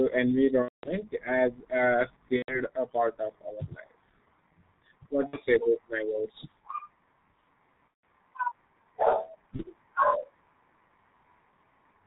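The whole speech clip runs through the G.723.1 codec. Nothing above 4 kHz survives. The voice is muffled and hoarse, and consonants smear. The damage is heavy, which fits a 6.3 kbit/s setting with 30 ms frames and a slowly updated voice model.

VoIP packet loss concealed by the speech codec strikes at 0.62–0.90 s, before "as a", and at 2.36–2.60 s, between "as a" and "a part". It recurs at 5.27–5.39 s, before "say about my words", then at 7.89–8.02 s and 9.56–9.64 s. In each gap the decoder repeats its last pitch and filter with falling gain. The result is a fading buzzy tone or coloured noise, and the voice stays weak briefly afterwards.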